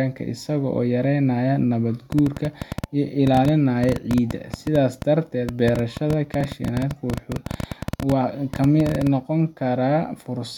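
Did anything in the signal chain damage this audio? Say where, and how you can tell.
Yes. From 2.12 s to 9.08 s a train of clicks ticks over the speech at an uneven pace of about 9.8 per second, some seventy in all, peaking well above the speech level. The clicks are alike in shape and continue through the pauses, so they come from outside the program material. The likely cause is interference or an intermittent contact in the analogue wiring, injecting the same pulse over and over.

At 6.41 s there is a tiny jump in the speech, with no gap of silence. This points to a dropped buffer (overrun) at the driver or buffer stage, likely caused by the software failing to read the samples before the hardware overwrote them. A millisecond or two of audio was lost, and the two sides were joined directly.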